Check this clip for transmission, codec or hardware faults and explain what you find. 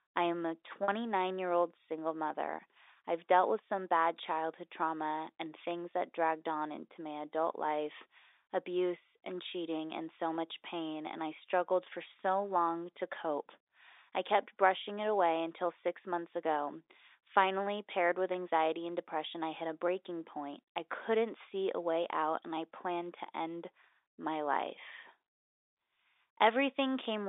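There is one transmission fault: packet loss with pitch repetition, near the start of the speech, heard through an ordinary G.711 telephone channel with its narrow 300 Hz to 3.7 kHz band.

From 0.84 to 0.88 s, about 40 ms of audio goes missing, which fits two lost 20 ms packets. The receiver fills the gap by repeating the last pitch period it received. Because the gap is short, nothing fades to silence. Instead, the voice seems to hang briefly on one buzzy, slightly held tone before it carries on.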